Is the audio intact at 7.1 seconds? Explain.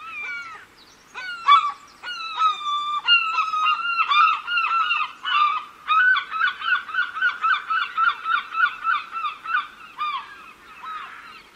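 No. From 4.36 to 10.36 s the adaptive stream drops to a lower bitrate, consistent with a fall from 64 to 32 kbit/s. Codec artefacts rise during that stretch. The change in quality is abrupt, while the waveform continues without a gap.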